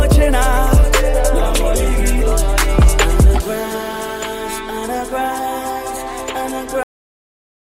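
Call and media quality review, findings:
Cut-off end at 6.83 s. Audio stops mid-sound, drops straight to digital silence to the end, no decay. Final buffers never written or played out.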